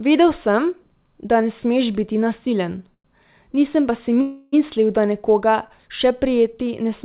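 At 2.94 s the speech stalls for about 0.1 s, to 3.06 s, and again at 4.21 s for about 0.31 s, to 4.54 s: a call audio freeze, likely from packets arriving late and the jitter buffer running dry. The first event's concealment fades to silence, which shows as a flat waveform for about 70 ms. The second event is a continuous fading buzz or hiss with no silence. On a spectrogram, each event appears as smeared, stretched harmonics below the 4 kHz ceiling of the narrowband codec. Speech resumes intact each time, arriving later than before.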